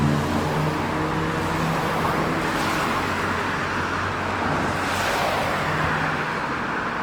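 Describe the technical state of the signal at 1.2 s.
At 1.2 s the audio carries plainly audible damage that runs through the whole clip: tones come out rough, grainy and noisy, yet the spectrum stays full up to about 20.1 kHz with few gaps. That points to Opus compression, likely in its CELT music mode at a low rate that fits about 24 kbps, where starved bands are filled with noise or folded copies. The scarcity of spectral holes is what separates it from MP3's swirling artefacts.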